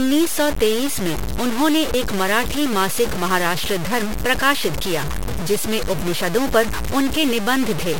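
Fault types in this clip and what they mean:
Low bit depth without dither: the speech sounds like it was likely truncated to only 4 bits, with no dither to loosen the error from the signal. Quantisation distortion sits only about 10 dB below the speech, so every syllable is wrapped in coarse grit that rises and falls with the voice, and quiet tails crumble or sputter. Unlike steady hiss or dithered noise, this grain tracks the signal and vanishes with it.
Dropped buffer (overrun): at 1.16 s and again at 1.94 s the speech jumps ahead, most likely because incoming samples were overwritten before being read. The first skip loses roughly 70 ms. The second loses about 20 ms. No gap of silence appears, which sets this apart from an underrun or dropout; the two sides simply butt together.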